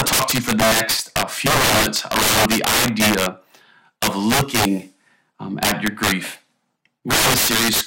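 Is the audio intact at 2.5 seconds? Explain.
No. Integer overflow runs throughout, including 2.5 s: speech peaks pushed about 14 dB past full scale wrap to the opposite sign, giving harsh cracks, seen as full-range flips on the waveform and vertical broadband streaks on the spectrogram.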